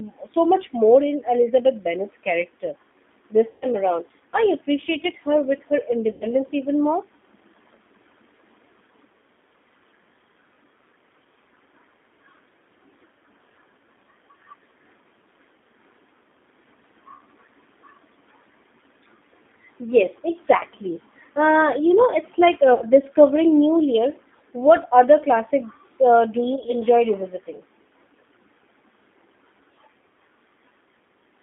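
The speech runs throughout through a G.729 codec at 8 kbit/s, which rebuilds the voice from a filter model and a few pulses per frame and limits the line to about 200 Hz to 3.6 kHz, so the audio sounds narrow, rough and plainly synthetic. VoIP packet loss concealed by the speech codec occurs at 3.50–3.66 s, 6.11–6.25 s, 20.58–20.64 s, 22.74–22.87 s and 26.56–26.75 s. In the last of these, the losses are scattered in short gaps of up to 20 ms. The decoder stretches its last pitch and filter into a fading buzzy or noisy tone, and the voice stays weakened briefly after each gap.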